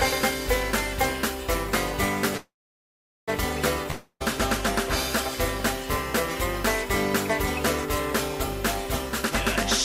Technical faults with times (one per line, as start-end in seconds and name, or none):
0.00-9.84 USB whine
2.37-3.30 call audio freeze
3.91-4.22 long network dropout
9.09-9.32 jitter buffer speed-up